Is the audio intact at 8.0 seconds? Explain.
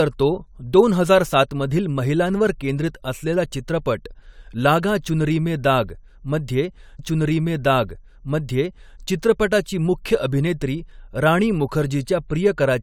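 No: a stream segment repeated from 6.98 to 8.99 s, after "चुनरी में दाग' मध्ये". The player queued the same segment twice, so about 2.0 s of speech replays, with a small blip at the jump back, before "चित्रपटाची मुख्य अभिनेत्री".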